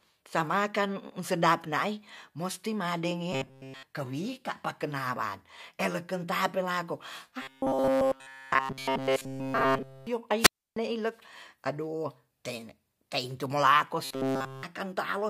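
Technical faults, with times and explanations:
3.33–3.84 s, 7.42–10.07 s and 14.05–14.63 s, robotic sound from repeated short buffers: the sound turns into a rigid metallic buzz at 133 Hz, just before "kewika pa kenaran eleken", right after "pa kenaran eleken tapelako", and after "teintu mulako". Essentially all of the audio in these stretches is a repeated snippet of about 7.5 ms. The likely cause is late-arriving audio, with the last fragment looped to fill the gap, which imposes that fixed pitch.
10.38–10.77 s, wireless microphone squelch dropout: hiss swells briefly, then the output drops to near silence for about 0.30 s before the sound returns. This is the pattern of a fading radio link on an FM wireless microphone. As the signal weakens, the noise rises, and the receiver's squelch then cuts the output entirely until the carrier recovers.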